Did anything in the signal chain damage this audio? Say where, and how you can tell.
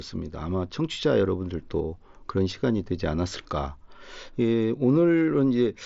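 No, nothing in the chain has damaged this speech; it has simply passed through a Bluetooth mSBC headset link, so the content stops at about 7.7 kHz, as that wideband path normally does.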